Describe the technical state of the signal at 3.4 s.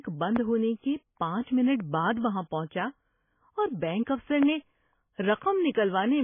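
MP3 compression artefacts are present at 3.4 s and throughout the speech. The likely cause is an encoder that was short of bits, which fits a bitrate of about 16 kbps. It dropped weak frequency lines frame by frame and removed everything above 3.5 kHz, leaving heavy watery, swirling smear.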